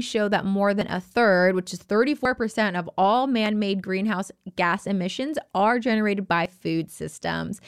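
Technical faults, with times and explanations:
0.81, 2.25, 3.46 and 6.46 s, dropped buffer (overrun): the speech jumps abruptly, and nothing in between is silent. The likely cause is the software failing to collect input before the hardware overwrote it, so a stretch of audio, about 20 ms at three points and closer to 50 ms at 2.25 s, vanished and the two edges were butted together. On the waveform each splice is a sudden discontinuity; on the spectrogram a thin vertical broadband line.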